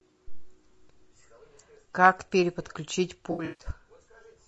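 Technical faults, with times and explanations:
Throughout: low-delay AAC compression. The speech sounds rough and grainy, with noise filling the gaps between pitch harmonics and a thin, synthetic-sounding top band. The likely cause is the short frames of a low-delay AAC codec such as AAC-ELD, running at a rate that fits about 32 kbps.
3.31 to 3.66 s: AAC frame loss with concealment. About 220 ms of audio drops out in pieces spread over 280 ms, the longest gap roughly 150 ms. The decoder patches each gap from the last good spectrum, which leaves a smeared, noisy, phasey stretch.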